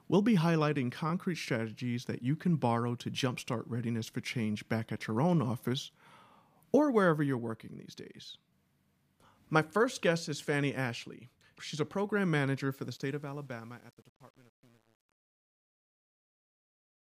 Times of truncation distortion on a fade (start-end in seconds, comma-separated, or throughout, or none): 12.75-17.04